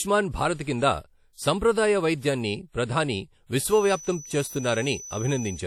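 Throughout, the speech has likely passed through WMA compression. Its long transform blocks smear quantisation noise over tens of milliseconds, so the damage is plainly audible. It sounds ringing and washy, with hiss that breathes with the speech, and nothing is left above 16.7 kHz, which fits a bitrate near 48 kbps.

From 3.63 s to the end, a loudspeaker-to-microphone loop is likely sitting just short of feedback. A single 6 kHz tone keeps ringing without building into a howl. It is heard as a thin feedback whistle, around 15 dB below the speech, that swells and fades slowly.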